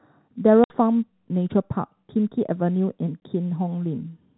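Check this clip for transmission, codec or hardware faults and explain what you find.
There is one transmission fault, packet loss filled with silence, occurring twice. At 0.64–0.70 s a 60 ms hole, consistent with three 20 ms packets, and at 3.20–3.22 s a 20 ms gap replace lost packets with silence, cutting the speech abruptly with hard edges. The band-limited G.711 telephone coding is audible underneath.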